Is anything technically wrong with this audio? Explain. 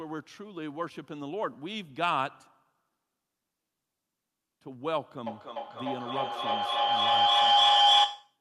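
Yes. A feedback howl runs from 5.27 s to the end of the clip. Two devices on the same call share a room, so the loudspeaker's output re-enters the microphone with more gain than it lost, and each pass round the loop grows louder. The repeats narrow onto the loop's favoured frequency, a tone around 700 Hz, pulsing roughly every third of a second and peaking about 11 dB above the speech. Nothing breaks the loop, so it never dies away.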